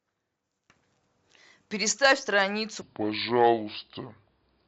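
From 2.81 s to the end of the clip, the speech plays back as a section at the wrong speed: it runs at 0.668 times its original rate, so it is slower and drops in pitch by roughly seven semitones at the same moment. Because speed and pitch shift together, the voice abruptly turns deep and drawn out. The likely cause is a stretch of audio being clocked out at a lower rate than the one it was recorded at.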